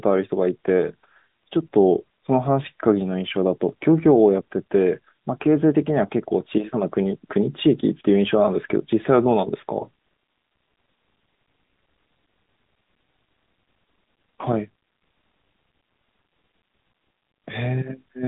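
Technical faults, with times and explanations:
Throughout, AMR narrowband mobile codec: the speech is squeezed into a phone-line band of about 150 Hz to 3.7 kHz, with nothing above 3.8 kHz. The plainly buzzy, synthetic edge fits the 10.2 kbps mode, where sparse pulses drive a vocal-tract model.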